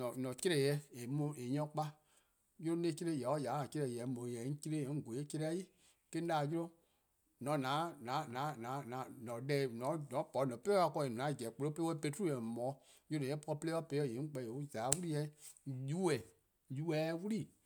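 No technical faults can be heard anywhere in the recording.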